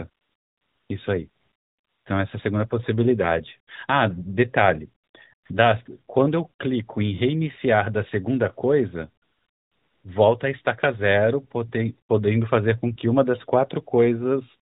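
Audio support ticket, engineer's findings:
AMR comfort noise at 0.10–0.90, 1.30–2.06, 5.04–5.14, 5.34–5.50, 5.86–5.88 and 9.24–10.04 s. Real background swapped for steady, smooth synthetic hiss during sender-side pauses (DTX). Unlike a noise gate, there is no dead silence, just a noise floor switching in and out.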